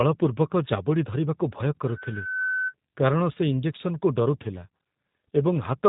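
Across the whole clip the speech carries G.729 codec damage. The sound points to a low-rate 8 kbit/s coder rebuilding the voice from a vocal tract model and sparse pulses. Nothing passes above about 3.8 kHz, and the speech has a rough, synthetic buzz that a plain band limit would not add.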